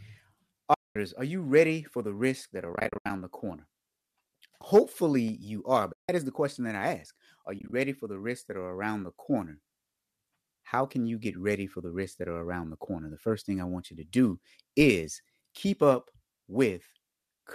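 AAC frame loss with muting cuts holes in the speech at 0.74–0.96 s, just before "are you ready for"; at 2.74–3.10 s, as several short dropouts, the longest about 70 ms; at 5.93–6.09 s, between "you are" and "is the question that"; and at 7.59–7.73 s, as brief scattered gaps of about 20 ms before "for the risks that". The decoder zeroed the missing frames, likely in the low-delay AAC-ELD stream, so the sound fades out and back in. On a spectrogram each hole is a blank vertical band across all frequencies with soft, tapered edges, and the waveform envelope ramps smoothly to silence rather than stepping.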